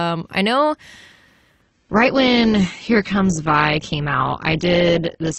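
At 1.62 s the audio steps down in quality and stays that way to the end. It's an adaptive stream at a lower bitrate: the connection slowed, so the player switched to a leaner encode of the same speech without leaving a gap. The switch is abrupt. Nothing above 8.3 kHz survives, so the top end goes dull, and the remaining detail gets that smeared codec texture, which fits a drop from roughly 64 kbit/s Opus to something near 12 kbit/s.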